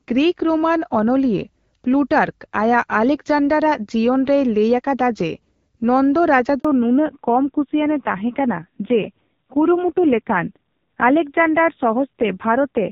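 Speech recorded over a phone call, with a handover gap at 6.59 s, where the sound cuts out for 60 ms while the call switches networks and the frames from that moment are lost. From 6.65 s to the end, a fallback to narrowband leaves nothing above 4 kHz. The sound becomes duller and rougher than the clear HD Voice (AMR wideband) section before it, consistent with a drop from about 12.65 kbit/s to a 5.9 kbit/s narrowband codec.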